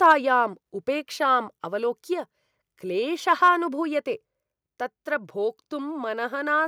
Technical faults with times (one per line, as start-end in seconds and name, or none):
0.04-0.13 microphone overload
0.12 microphone volume stepped down
3.31-3.49 microphone overload